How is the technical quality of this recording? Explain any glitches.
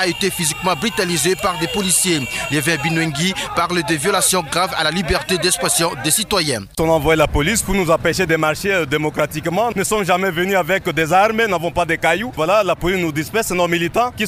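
No technical faults are audible anywhere in the recording, so there are no glitches to explain.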